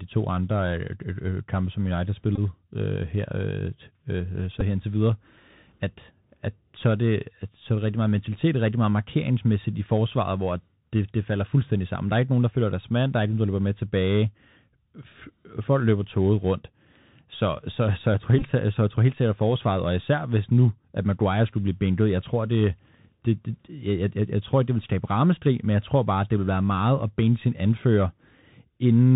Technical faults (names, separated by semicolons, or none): Bluetooth CVSD headset codec; Bluetooth headset packet repeated